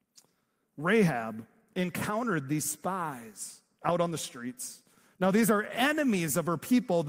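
No technical faults are audible.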